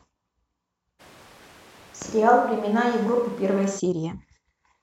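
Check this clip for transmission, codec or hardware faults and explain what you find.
One hardware-type fault is audible. Switch to a distant microphone, 1.01 to 3.78 s: the speech turns abruptly roomy, hollow and thin, with noise about 30 dB down and little level change, likely from losing the close microphone.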